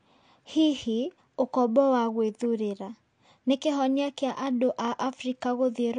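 Throughout the speech, the sound is dull and smeared, with a fizzy, warbling edge on sibilants, most likely from AAC compression at a low bitrate, which fits around 32 kbps. A spectrogram shows a hard ceiling near 9.8 kHz.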